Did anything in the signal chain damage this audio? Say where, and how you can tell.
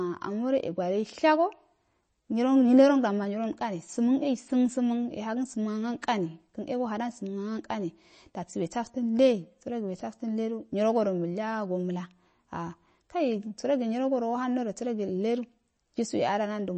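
Yes. Across the whole speech clip the sound is watery and swirly, with a metallic, chirping edge on the s sounds and softened consonant attacks, and nothing survives above about 8.3 kHz. This points to the codec stage, most likely MP3 compression at a low rate, which fits roughly 32 kbps. Short of bits, the encoder cuts the treble at a fixed frequency and drops weak frequency lines that flicker in and out between frames, producing the swirl and chirps.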